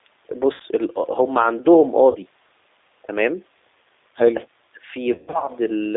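G.729 codec, throughout: the speech is confined to roughly 300 Hz to 3.7 kHz and carries a plainly audible rough, synthetic edge. The codec rebuilds the speech at 8 kbit/s from a vocal tract filter, a pitch predictor and a few pulses per frame.

VoIP packet loss concealed by the speech codec, at 0.54 to 0.62 s and 2.11 to 2.18 s: about 60 ms and then 40 ms of audio go missing. The decoder fills each gap by extending its last pitch and filter at falling gain, so the speech smears into a brief buzzy, fading tone and recovers weakly afterwards.

Speech suppressed in double talk, at 4.46 to 4.93 s: the speech dips by about 30 dB for roughly 0.4 s in total, thinning and partly cutting out. The likely cause is an echo canceller that could not separate this talker from the far-end echo while both spoke, and attenuated everything.

VoIP packet loss concealed by the speech codec, at 5.12 to 5.51 s: about 260 ms of audio is lost in scattered pieces across 360 ms, with the longest stretch about 120 ms. 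The result is repeated buzzy, decaying fills and distorted, weak speech between them.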